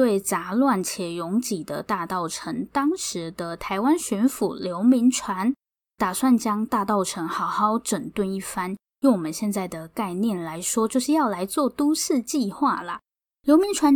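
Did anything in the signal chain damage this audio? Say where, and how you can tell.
No, nothing in this speech recording gives away damage at any stage of the chain, so there's nothing here to trace back or point to.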